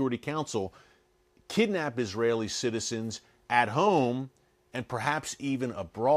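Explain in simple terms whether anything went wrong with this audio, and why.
Nothing went wrong with this speech recording: the signal stays steady and intact throughout, with no technical faults to be heard at any point.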